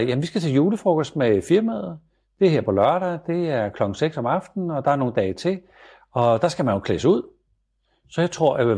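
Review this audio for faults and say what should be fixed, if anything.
Nothing stood out on listening to this speech, so there is nothing here that needs fixing.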